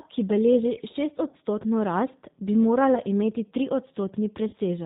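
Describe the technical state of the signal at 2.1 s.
At 2.1 s the speech carries G.729 codec damage, present throughout the clip: the signal is rebuilt from a vocal tract filter, a pitch predictor and a few sparse pulses per frame, which fits an 8 kbit/s coder. It sounds rough and synthetic, and a spectrogram shows a hard ceiling at 4 kHz.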